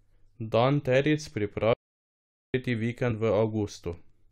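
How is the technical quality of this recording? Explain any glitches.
The recording has two distinct glitches.

From 1.73 to 2.54 s there is an audio dropout to silence: the speech cuts out and about 0.80 s is lost. The gap is silent with no room tone, unlike a level dip, so the input likely disconnected or was muted while silence kept being written.

At 3.1 s, compressed frames are skipped. Roughly 20 ms of audio is missing, and the audio jumps ahead by that amount.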